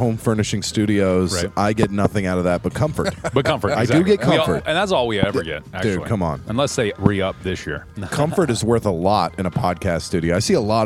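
Four loud pops cut through the sound: a pair between 1.83 and 2.08 s, then single ones at 5.23 to 5.26 s and 7.06 to 7.08 s, each peaking around 20 dB above the material. The likely cause is a brief voltage jolt, such as a switch, static discharge or driver glitch, which the following circuitry turns into a short thump. Unlike a dropout or an edit splice, nothing is missing: the sound runs on unbroken beneath each pop.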